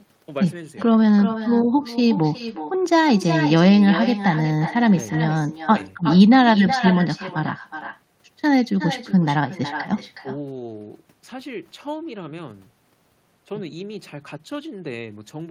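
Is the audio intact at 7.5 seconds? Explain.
No, not really. The echo with no canceller runs through the whole clip, so it's there at 7.5 s too. The far end's loudspeaker feeds back into its mic, and every phrase returns roughly 0.4 s later, about 11 dB down, as a thinner shadow.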